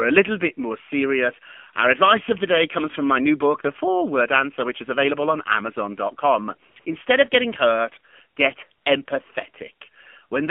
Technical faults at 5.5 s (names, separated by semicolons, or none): AMR narrowband mobile codec